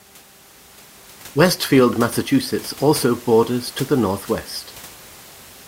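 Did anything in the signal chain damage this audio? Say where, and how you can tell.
No, the signal chain is intact.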